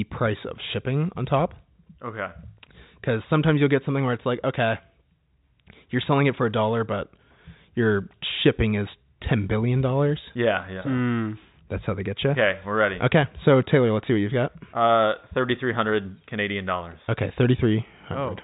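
Nothing stood out on listening to this speech, which comes over a G.711 telephone line with no sound above about 3.8 kHz.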